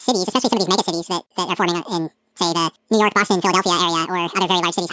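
From start to finish, the speech suffers a wrong sample rate. The samples are read out twice as fast as intended, with no conversion. Everything runs at double speed and a full octave higher. Voices sound squeaky and rushed. This fits 8 kHz audio played at 16 kHz.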